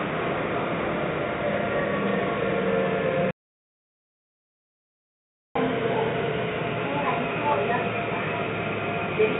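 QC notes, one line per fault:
3.31–5.55 s, audio dropout to silence: the sound cuts off abruptly and returns about 2.24 s later, with silence between and no room tone. On the waveform the trace is a flat line. On the spectrogram the band-limited (below 4 kHz) call-path content gives way to blank, likely because the input was lost while silence kept being written.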